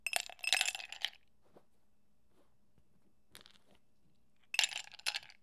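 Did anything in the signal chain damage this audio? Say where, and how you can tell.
No, nothing in the signal chain damaged this audio.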